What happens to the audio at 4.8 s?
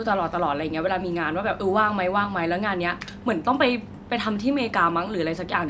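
Nothing goes wrong at 4.8 s; the speech there is intact, with only the normal bass trimming of the call microphone processing.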